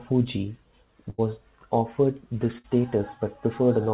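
At 1.1 s and again at 2.58 s, the speech hits a burst of packet loss. Each gap is about 80 ms and 60 ms. The receiver stretches the last sound and fades it. Then the speech jumps ahead, skipping audio.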